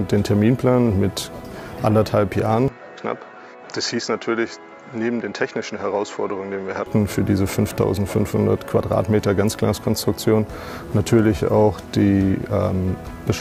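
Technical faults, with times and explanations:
2.68 to 6.86 s, input switched to a poorer device: everything above 7.6 kHz vanishes, the level drops about 5 dB and a faint new noise floor appears, likely because a narrower-band microphone took over. A spectrogram shows a flat ceiling there, and the waveform shrinks slightly, with no gap at either switch.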